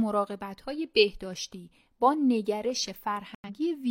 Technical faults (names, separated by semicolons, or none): corrupt frame muted